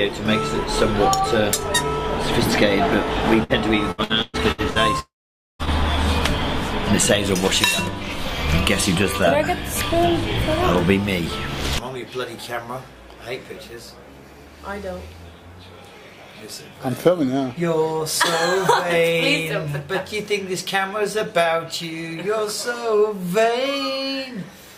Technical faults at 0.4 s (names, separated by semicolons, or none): none